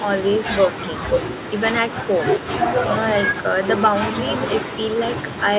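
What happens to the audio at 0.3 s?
Nothing goes wrong at 0.3 s; the speech there is intact, with only the narrowed, telephone-like bandwidth of the call path, which stops at about 4 kHz.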